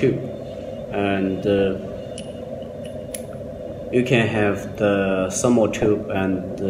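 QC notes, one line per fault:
1.59–1.65 s, 3.76 s and 5.78–5.86 s, DAB burbling: weak reception lets a small fraction of a percent of bit errors slip past the error correction into the MP2 audio data, corrupting samples across nine to thirteen frames each time. Each burst comes through as short blips of noise in single sub-bands laid over the programme, the last run slightly longer and denser.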